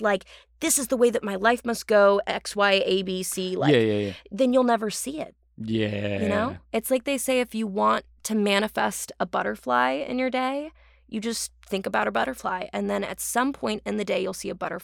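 No technical faults are audible.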